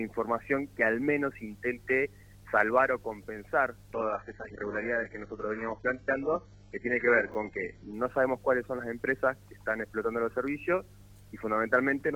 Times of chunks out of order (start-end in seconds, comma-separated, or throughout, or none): 7.32-7.35